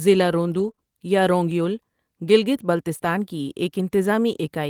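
From 0.59 to 0.69 s, lost packets were rebuilt from error correction: the decoder played the low-bitrate copies carried in later packets, so about 60 ms of the speech turns rougher and noisier instead of dropping out. Short concealed packet loss follows at 0.71 to 0.75 s and 0.75 to 0.79 s, just before "یا رونگ یُل گلگت", and again at 2.97 to 3.01 s, just after it. Each time about 20 ms never arrived and was filled by extending the preceding sound, leaving a brief smear or wobble.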